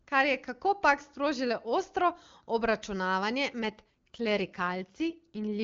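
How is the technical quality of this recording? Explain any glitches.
One glitch stands out in this speech. From 3.62 s to the end, the voice turns rougher and more synthetic, with no gap and no loss of bandwidth. This is an AMR rate drop. The network has pushed the AMR-WB codec down to a lower rate to free bits for error protection, and the sound fits a fall from 23.85 to about 8.85 kbit/s.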